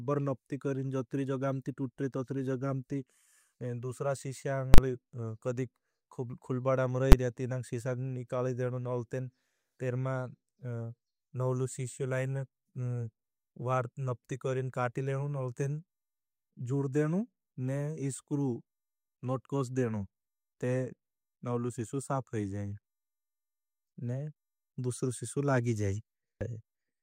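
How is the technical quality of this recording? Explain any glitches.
The speech is marred by two sharp bangs. At 4.74 to 4.78 s and again at 7.12 s, loud pops cut through. These are invalid numbers at full scale: a calculation went infinite or invalid, pinning the output to its extreme value for 40 ms, then 10 ms.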